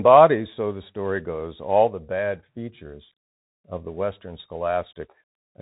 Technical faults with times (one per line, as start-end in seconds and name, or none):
0.00-5.61 Bluetooth CVSD headset codec